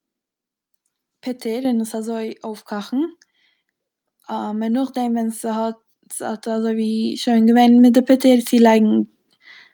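Speech, with the microphone volume stepped up twice: at 1.65 s the input level jumps by about 7 dB, and at 2.67 s by about 5 dB more, as the call software raises the device gain in single increments. Voice and background noise rise together at each point. On a waveform the envelope widens abruptly at both times. On a spectrogram every frequency band, including the noise floor, brightens along a sharp vertical line.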